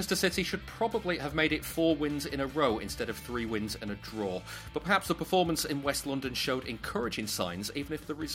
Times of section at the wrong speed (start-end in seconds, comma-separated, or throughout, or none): none